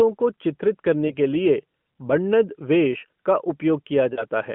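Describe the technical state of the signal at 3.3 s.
At 3.3 s the speech is intact, with no fault at that moment, only the narrow telephone-band sound of the AMR narrowband mobile codec path, which can be heard as light codec colouring and no content above about 3.4 kHz.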